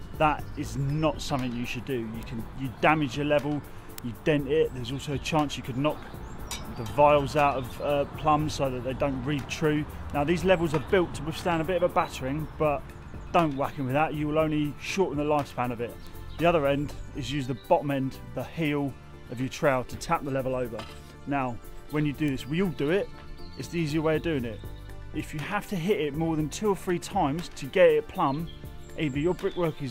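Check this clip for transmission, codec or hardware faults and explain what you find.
Four bit error spikes occur, at 2.23, 3.98, 16.07 and 22.28 s. A single flipped bit corrupts one sample each time, throwing its value out by a power of two before the next sample returns to normal. Each is a lone broadband tick, loudest at 3.98 s (about -6 dBFS), near -18 dBFS at 2.23 and 22.28 s, and faintest at 16.07 s (about -24 dBFS).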